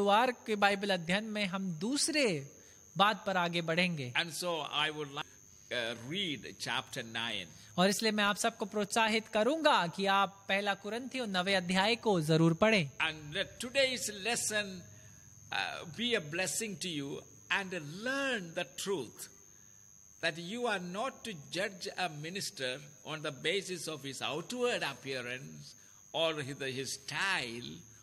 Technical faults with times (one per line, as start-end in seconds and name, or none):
5.20 stream segment skipped